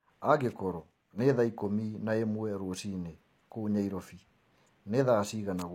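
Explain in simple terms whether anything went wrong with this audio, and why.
Two things went wrong with this speech recording.

The first runs through the whole file. The top of the sound is missing, with nothing above about 16 kHz, and the speech carries the residue of heavy compression. This is low-bitrate audio saved at a high bitrate. The speech was likely squeezed hard by an earlier, low-quality encoding and then saved again as a large MP3. Saving it at a higher quality afterwards cannot bring back detail that was already thrown away, so the larger file only preserves the damage.

The second is brief. From 0.80 to 1.19 s the sound suddenly drops to a noticeably lower level, then jumps back up. This is a case of one channel dropping out. For that moment, one side of the stereo signal was likely lost. When the two sides are combined into one, the sound shared by both sides is left with only half its usual contribution. 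That is why the level sags abruptly and then returns at once.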